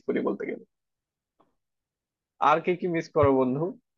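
At about 3.22 to 3.25 s compressed frames get skipped, so the speech jumps ahead roughly 20 ms.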